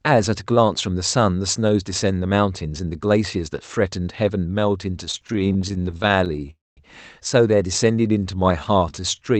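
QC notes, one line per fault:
5.11 to 6.50 s, repeated stalls (stutter): the sound keeps catching and dragging, with 32 tiny holes patched over, none longer than 22 ms, adding up to about 390 ms of filler, roughly a quarter of that stretch. Packets were trickling in slower than playback, so the buffer kept running dry, yet nothing's actually lost.
6.50 to 6.79 s, call audio freeze: a hold of about 264 ms where the last sound is stretched out as a fading buzz and then about 200 ms of near silence before things pick up right where they left off. Likely a burst of delayed packets emptying the jitter buffer; the delay grows by 264 ms.
7.91 to 9.19 s, jitter buffer slow-down: this tail end plays at about 85% speed with the pitch unchanged and drawn-out sounds, about 200 ms added in total. The receiver was repeating single pitch cycles and slivers of pauses to rebuild its reserve.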